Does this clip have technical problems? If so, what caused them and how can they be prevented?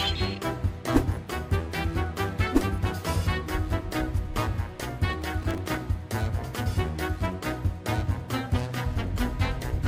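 Yes. From 5.10 to 5.75 s there is a burst of processor overload crackle: a gritty tearing that rides on top of the sound and stops once the load passes. The processor kept missing its deadlines for very short buffers, around a millisecond and a half each, about twenty times over that stretch. Each time it replayed a piece of old audio with hard edges. Those short clicks bunched into a dense cluster, rather than a single dropout or a steady hiss, are what mark it as overload. Keeping the processing load low, or using a larger buffer, prevents it.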